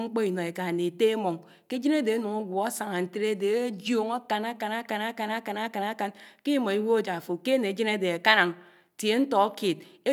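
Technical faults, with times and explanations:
No technical faults detected.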